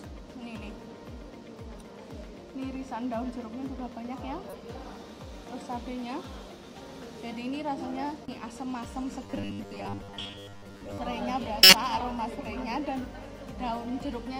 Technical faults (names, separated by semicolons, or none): corrupt frame decoded; robotic sound from repeated short buffers